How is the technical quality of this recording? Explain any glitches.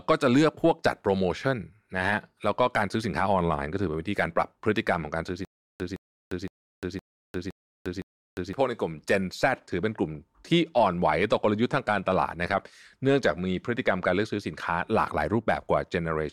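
The recording has one clear glitch, a stutter with silent gaps, from 5.45 to 8.53 s. A 163 ms fragment repeats six times, each followed by 351 ms of dead silence, likely a stalled stream replaying its last buffer. Unlike simple dropouts, the same burst returns every 514 ms.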